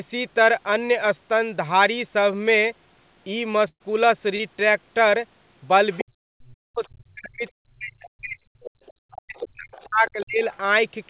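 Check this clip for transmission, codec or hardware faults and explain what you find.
Four kinds of fault can be heard: two packet-loss events early on, followed by echo leakage and double-talk suppression through the second half.

Burst of packet loss, 3.68 to 3.83 s: about 120 ms of packets were lost, so the receiver stretched the last sound for roughly 118 ms and faded it out. The result is the last sound held and fading into near-silence before the audio resumes further on, with that stretch gone.

Short concealed packet loss, 4.36 to 4.42 s: about 40 ms of audio arrived too late for the decoder, which filled about 31 ms by extending the preceding sound and then blending back in. The result is a brief smear or wobble rather than a clean dropout.

Other side's voice leaking through, 5.91 to 6.04 s and 8.64 to 10.57 s: the far-end voice is audible in the background at about 15 dB and then about 20 dB below the talker. 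The likely cause is loudspeaker playback that the echo canceller did not fully remove.

Speech suppressed in double talk, 6.02 to 8.57 s and 9.17 to 10.44 s: the talker's voice dips and breaks up, with roughly 2 s and then roughly 1 s affected and the deepest drops about 40 dB. The likely cause is the echo canceller turning everything down while both sides spoke at once. All of this sits within a narrowband G.711 call path with nothing above 4 kHz.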